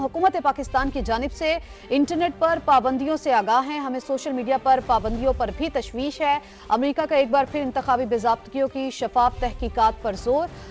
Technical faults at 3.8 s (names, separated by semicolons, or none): none